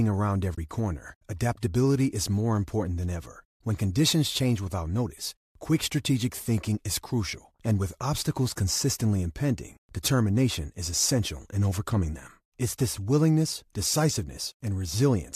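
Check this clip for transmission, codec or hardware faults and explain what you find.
One fault stands out: a short AAC frame loss with muting from 0.55 to 0.58 s, just before "corner adaptability is more". About 30 ms of audio drops to silence, which fits three lost frames of a low-delay codec, likely AAC-ELD here. The decoder zeroed the missing spectrum, and the overlapping windows fade the sound out and back in, leaving a soft-edged hole. A hard dropout would leave an abrupt edge, and repetition-based concealment would fill the gap with smeared sound instead of silence.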